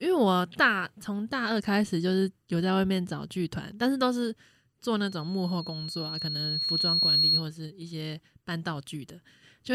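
From 5.01 s to 7.48 s, loudspeaker feedback squeal appears: the microphone re-amplifies its own loudspeaker output, and at 4.3 kHz the loop gain exceeds one. A pure tone swells over roughly two seconds to about 5 dB above the speech.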